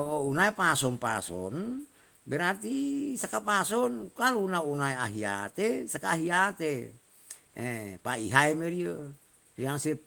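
Speech carried over Opus in hybrid mode at 24 kbps, fullband with content reaching about 20.1 kHz and only light codec damage, shows no technical fault.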